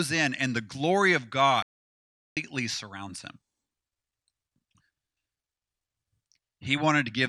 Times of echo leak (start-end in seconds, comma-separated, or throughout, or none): none